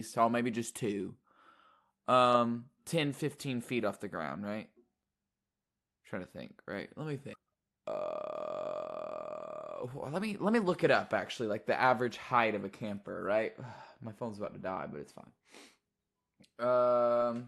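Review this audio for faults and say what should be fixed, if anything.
Skip ahead at 7.33 s: roughly a second of speech is missing, dropped on the way or by the jitter buffer when it overflowed, and the two sides are spliced with no gap.

Jitter buffer speed-up follows at 7.42 to 9.41 s (107%), 9.83 to 11.44 s (116%, ending just before "like the"), and 11.84 to 14.09 s (104%, ending before "phone's about to die"). The receiver trimmed pitch periods to drain excess delay, so the speech runs faster at unchanged pitch and sounds hurried in the first two stretches. The Opus coding noise and 12 kHz band limit come from the normal call path.

To prevent both faults, fix the upstream packet delay bursts and give the jitter buffer enough headroom to absorb them without overflowing.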